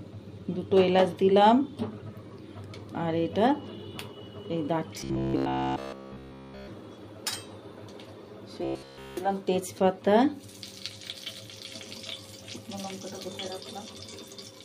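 From 5.01 to 6.68 s and again from 8.65 to 9.17 s, the sound collapses into robotic sound from repeated short buffers: a rigid, metallic buzz at 66.7 Hz that only loosely tracks the underlying audio. That rate points to a fragment of about 15 ms being looped over and over, with essentially none of the real material getting through. The likely cause is audio data arriving too slowly, so playback keeps re-sending the last short buffer instead.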